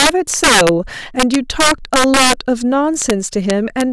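Integer overflow runs throughout the speech. The signal was driven about 6 dB too hot, so a small share of loud peaks wrapped to the opposite sign, producing violent cracks.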